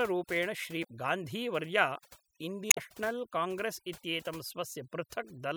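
Speech clip with overdone noise removal throughout: the reduction was set so hard that frequency bands near the noise estimate are pulled down or removed, taking quiet parts of the voice with them, leaving near-silent gaps with twinkling specks. Damaged data in a compressed stream produces a brief blip at 0.83 s and a longer glitch from 2.70 to 2.78 s, where corrupted frames are misread and the decoder loses sync before finding the next frame header.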